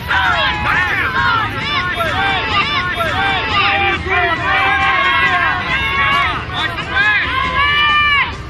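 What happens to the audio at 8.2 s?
At 8.2 s the audio plays through cleanly, with no dropout, click, distortion or other fault.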